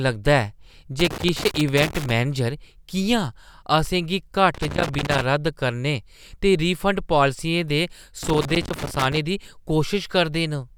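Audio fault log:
1.0–2.1 s, 4.5–5.2 s and 8.2–9.2 s: loose connector crackle. A worn or dirty contact somewhere in the cable path is shifting and repeatedly losing and regaining contact, so the speech signal is cut in and out many times a second, and any DC on the line turns each break into a pop. Three separate bursts of irregular scratching and crackle therefore sit over the speech, lasting roughly 1.1, 0.7 and 0.9 seconds.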